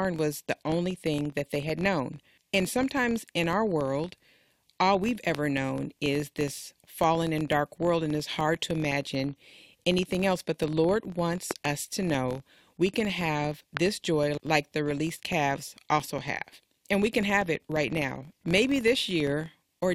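A steady buzz at about 43.1 Hz runs under the speech from start to finish, made of faint regular ticks that grow louder when the speech is loud and fade in the pauses. This is a filter restarted on every block: the filter loses its stored state at each block boundary and begins again from silence, leaving a small transient every time. The tick rate points to blocks of about 1024 samples.

At 5.35 to 5.37 s, between "all we've" and "known is this fallen", a single loud pop breaks through at roughly 15 dB above the speech, which carries on underneath. At 11.51 to 11.67 s, just before "us to know we", two pops arrive in quick succession at a similar level. At 13.77 to 13.79 s, between "know we can have" and "joy like the released", one more pop sounds. Each is likely a sudden voltage step or pulse, such as from a switch, static or a driver glitch, added to the signal and shaped by the circuits after it.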